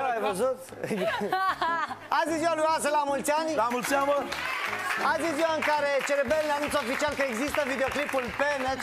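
No technical faults are audible.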